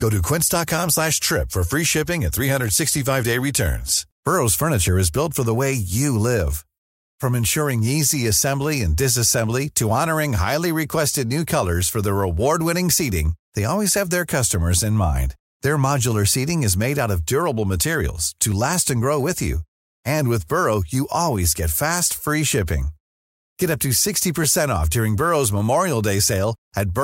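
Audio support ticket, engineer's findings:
Single sharp click in the speech at 18.52 s, between "of durable materials to" and "last and grow with". Likely dropped samples: under a millisecond of stream missing, so the waveform jumps straight to a later value. Thin vertical line across the spectrum at that point.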